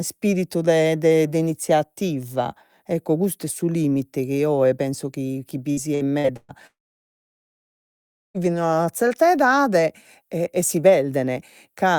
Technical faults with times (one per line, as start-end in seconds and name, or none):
5.71-6.52 repeated packet loss (robotic sound)
6.67-8.37 long network dropout